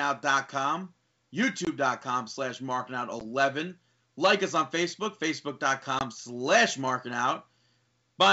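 Short hard-edged silent gaps cut the speech at 1.65 to 1.68 s, 3.20 to 3.23 s and 5.99 to 6.03 s, each followed by a brief roughness. This is packet loss on an ADPCM call: roughly two, one and two packets dropped (20, 10 and 20 ms). The decoder's predictor and step size then lag the sender's until they resettle, within tens of milliseconds, over clear wideband G.722 audio.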